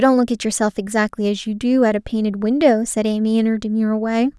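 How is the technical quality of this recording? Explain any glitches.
Nothing goes wrong on the technical side here, so there aren't any glitches to explain.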